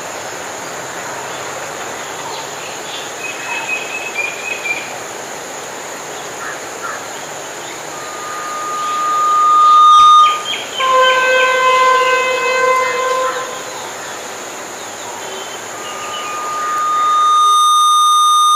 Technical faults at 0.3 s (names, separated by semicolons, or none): none